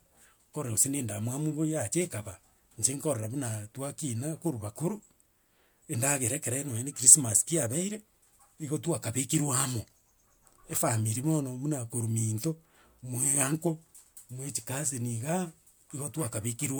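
Throughout, the speech shows generation loss, most likely from about three MP3 encodes at around 128 kbit/s. Each pass requantises on a shifted frame grid, piling up noise and spectral gaps, so it sounds swirly, smeared and hollow, with blurred attacks and nothing above 20.1 kHz.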